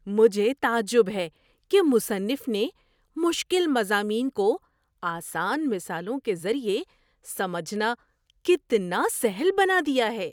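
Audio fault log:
Nothing turned up in this speech clip, so there's nothing to log here.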